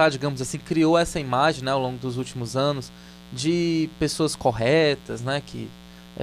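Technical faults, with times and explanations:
Throughout, mains buzz: a steady, raspy buzz sits under the speech for the whole clip, roughly 25 dB below it. It is built on 60 Hz mains. Sharp switching spikes from a dimmer, a rectifier or an unshielded cable leak into the signal twice per mains cycle, and those abrupt edges spread energy across a long ladder of 60 Hz harmonics up to several kHz, giving the buzz its rough, edgy texture.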